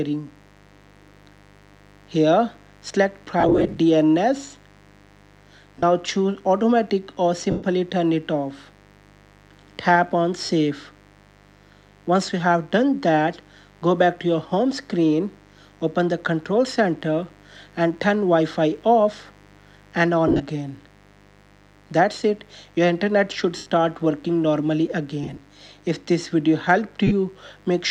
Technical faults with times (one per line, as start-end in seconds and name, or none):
0.00-27.91 mains buzz
3.40-3.78 lost LE Audio frames
5.79-5.83 lost LE Audio frames
7.50-7.63 lost LE Audio frames
10.45-10.49 lost LE Audio frames
20.28-20.42 lost LE Audio frames
23.57-23.66 lost LE Audio frames
25.23-25.37 lost LE Audio frames
27.07-27.12 lost LE Audio frames